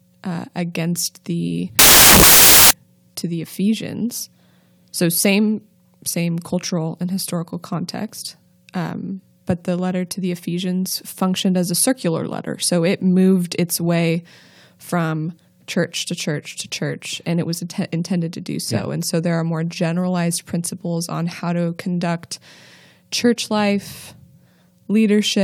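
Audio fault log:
1.79–2.71 s, samples built from the wrong bytes: loud, harsh broadband noise burst for under a second, as misaligned byte order turns each sample's jittery low bits into its dominant part.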